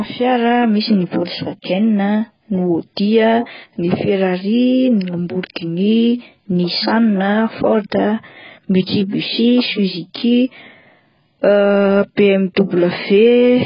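Throughout, the speech sounds dull, smeared and warbly, with nothing above 5.2 kHz, likely heavy AAC compression at a very low bitrate, around 12 kbps.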